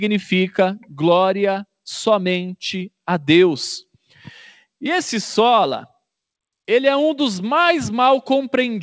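No faults can be heard anywhere in this audio.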